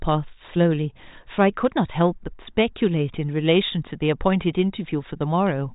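The clip is speech carried through 40 kbit/s G.726 ADPCM, with nothing above about 3.8 kHz, and nothing is technically wrong with it.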